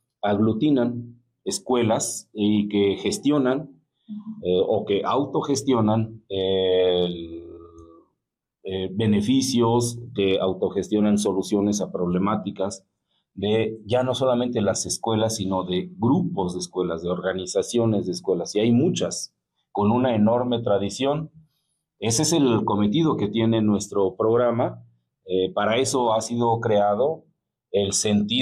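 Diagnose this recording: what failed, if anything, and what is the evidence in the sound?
No audible fault detected.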